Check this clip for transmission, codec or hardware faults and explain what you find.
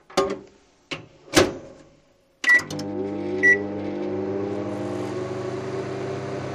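One fault stands out, a brief overload near the start.

Hard clipping, from 1.37 to 1.42 s: for about 50 ms the signal is driven roughly 10 dB beyond what the stage can pass, so the peaks are sliced flat. Those squared tops add high harmonics, heard as a short, harsh crackling burst on the loud sound.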